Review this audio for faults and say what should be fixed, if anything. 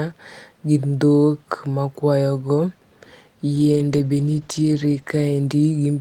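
There's a call bitrate drop from 3.56 s right through to the end of the speech. The bandwidth estimate sagged and the encoder got squeezed, so it codes much more coarsely and trims the highs. You can hear it go rough and muffled, which fits a fall from roughly 32 to 13 kbps, bottoming out for about 1.3 s. To prevent it, set a sensible bitrate floor and smooth the bandwidth estimator so it doesn't overreact to brief dips.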